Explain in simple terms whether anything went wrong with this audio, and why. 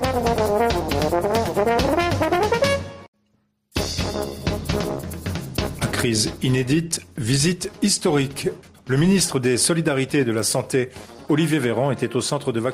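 Gain pumping runs through the whole recording: loud and soft parts end up closer in level, and the sound is squashed. The likely cause is a fast limiter fighting excessive microphone gain.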